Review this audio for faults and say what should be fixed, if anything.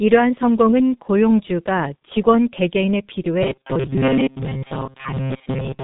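The whole clip runs through the G.723.1 codec, and it's heavily squeezed, which fits a stream of around 6.3 kbit/s. Nothing above 3.8 kHz survives, so the speech sounds dull and hoarse, and consonants smear because the codec's slow-moving voice model can't track quick changes. Fix: capture or send with a wideband codec at a healthier bitrate.

From 3.43 s right to the end, there's robotic sound from repeated short buffers: a stiff metallic buzz at 133 Hz. That points to a roughly 7.5 ms chunk being looped, likely because audio arrived too late, with most of the real signal skipped. Fix: give the playback buffer more headroom so it never runs dry.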